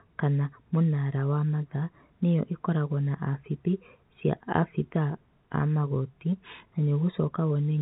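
Speech over a telephone line, with nothing technically wrong.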